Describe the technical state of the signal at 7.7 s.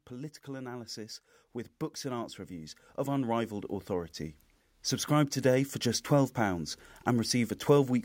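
At 7.7 s the speech signal is intact, with no dropout, clipping, glitch or other fault heard at that moment.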